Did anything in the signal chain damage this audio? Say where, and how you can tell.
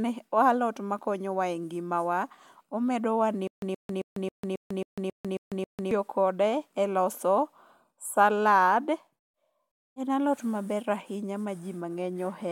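Yes: stutter with silent gaps, 3.48–5.91 s, likely a stalled playback buffer replaying a 124 ms burst nine times; the waveform shows 147 ms silent gaps.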